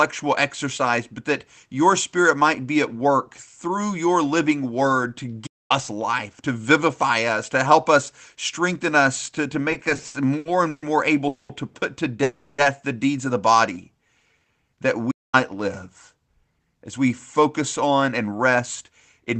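At 5.46 s the speech cuts out mid-flow for about 0.23 s of silence before resuming, a playback stall most likely caused by the player running short of data or its thread being blocked.

From 9.71 to 10.84 s, after "strengthen us to to" and before "more able to put", the speech drags and stutters. These are repeated stalls (stutter): eleven times the jitter buffer ran dry and the receiver extended the last sound. The gaps add 350 ms, the longest 130 ms, and about 31% of that stretch is filled-in sound, with nothing missing.

Two call audio freezes follow. From 11.28 to 11.51 s, between "more able" and "to put to", the sound holds as a fading buzz or hiss for 210 ms. From 12.23 to 12.60 s, between "able to put to" and "the deeds of the", it does the same for 350 ms. In both the audio then resumes where it stopped. Each was likely caused by packets held up in transit emptying the jitter buffer, so the inserted wait pushes everything after it later.

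From 13.73 to 14.69 s the speech runs at about 90% speed with unchanged pitch and drawn-out sounds. This jitter buffer slow-down added 103 ms by repeating pitch periods to rebuild its reserve.

At 15.11 s comes a second silent gap of about 0.22 s, again a playback stall, likely with the output pausing until data returned.

From 16.28 s to the end, the speech sounds hurried at about 107% speed with the pitch unchanged. This is a jitter buffer speed-up, which trimmed roughly a fifth of a second of short pitch-period slices to shed excess delay.

Throughout, the sound carries the Opus call path's coding noise and an 8 kHz high-frequency limit, which fits a low-bitrate stream of around 20 kbps.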